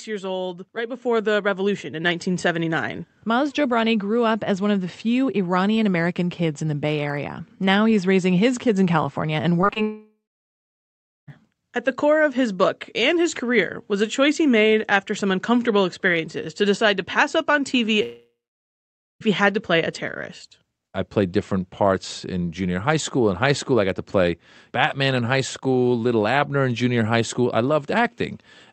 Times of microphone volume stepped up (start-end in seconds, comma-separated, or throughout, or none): 1.02